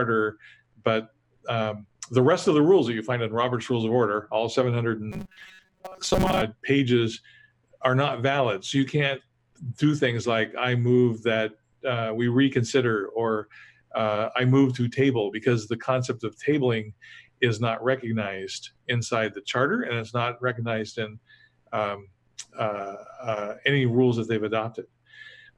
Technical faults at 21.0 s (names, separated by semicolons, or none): none